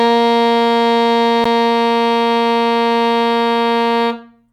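At 1.44 s the music drops out for 12 ms, a gap between stream segments: mistimed segment boundaries leave a hole the player fills with hard-edged silence.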